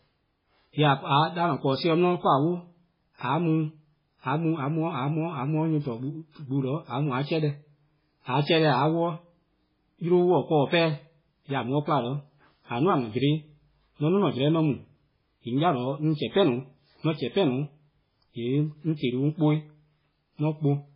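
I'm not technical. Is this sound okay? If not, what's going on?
No. Throughout the speech there is nothing above about 5.2 kHz, so it sounds dull and muffled, with a heavy watery, swirling quality and smeared edges on sounds. This is likely strong MP3 compression, which discarded treble and fine detail to save space.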